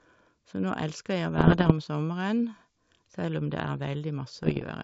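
Speech over a wideband link, with two bursts of bit errors on an ADPCM link. The first runs from 1.38 to 1.73 s and the second from 4.34 to 4.64 s. Each sounds like pops and rough, crackly patches with brief jumps in level. Flipped bits throw off the decoder's step size and predictor, so each hit rings on for a few milliseconds. The first burst is harsher, which points to an error rate near one percent against about half that later. The G.722 coding itself adds at most a faint upper-band hiss.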